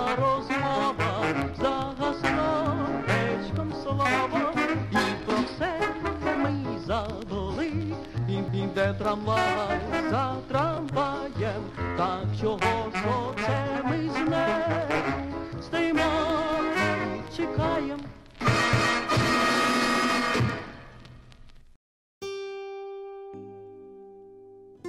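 Overlapping chunks cause a stutter at 8.48 s and again at 18.73 s, where about 250 ms of audio plays twice. The joins fall 10 s apart, consistent with 10 s processing chunks. Unlike a dropout, nothing is lost: the sound repeats rather than skipping.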